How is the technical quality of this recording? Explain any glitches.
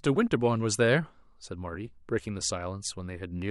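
No technical faults or glitches can be heard anywhere in the recording.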